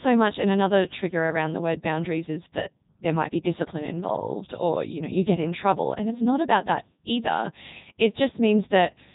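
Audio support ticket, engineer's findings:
Robotic, buzzy speech throughout, nothing above 3.8 kHz. Codec 2 vocoder: waveform discarded, decoder resynthesises voice from sine waves using only pitch, voicing, energy and spectral envelope. Heavy damage, consistent with the 3.2 kbit/s top mode.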